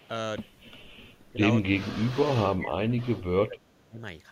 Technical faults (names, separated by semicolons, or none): echo leak; speech suppressed in double talk